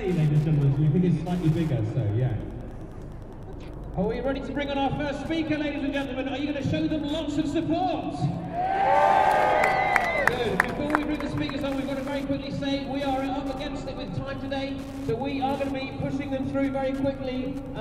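Wi-Fi interference runs throughout the audio: a steady ticking about ten times a second, roughly 30 dB below the signal, from a nearby Wi-Fi radio's 102.4 ms beacon being rectified by the audio circuit. A spectrogram shows evenly spaced thin vertical broadband lines.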